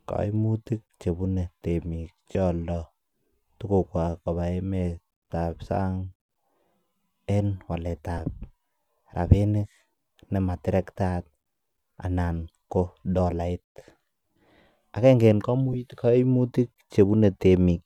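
At 2.32 to 2.35 s the speech breaks up for about 30 ms, which fits three lost 10 ms LE Audio frames. Shorter 10 ms dropouts follow at 5.32 s, 8.18 s and 15.73 to 15.75 s. Each time, the LC3 decoder covers the missing frames by repeating the last spectrum with randomised signs, so the sound turns into a brief noisy smear. On a spectrogram the harmonic lines blur into a short vertical noise patch, and the waveform shows a rough, scrambled stretch at roughly the surrounding level.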